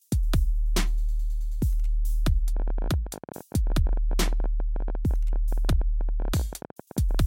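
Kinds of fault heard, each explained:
Train of clicks: from 2.57 s to 7.16 s, some seventy near-identical pulses at about 16.2 per second, unevenly spaced and peaking about as loud as the sound itself, ticking through gaps too; likely interference or a faulty connection or power supply.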